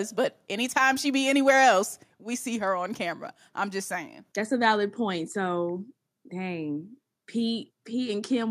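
At about 2.04 s, right after "she be anywhere else" and before "we see her on", the whole speech clip drops in level in a single step, voice and background together, by about 4 dB. That's the classic microphone volume stepped down pattern: the call software most likely decided the input was running too hot and pulled the device's input volume down in one move, so everything after that point just sits noticeably quieter.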